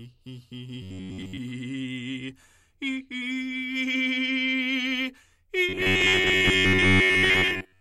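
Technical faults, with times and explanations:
0.82 to 1.37 s and 5.69 s to the end at 7.81 s, robotic sound from repeated short buffers: the music collapses into a stiff, metallic buzz locked at 93.8 Hz, following the original only loosely. This likely comes from audio arriving too seldom, so the playback keeps re-playing the last fragment of about 10.7 ms while real material is skipped, with most of the audio replaced. That fixed repeat rate imposes the buzz's pitch.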